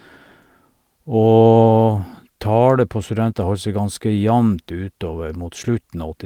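No technical faults can be heard anywhere in the recording.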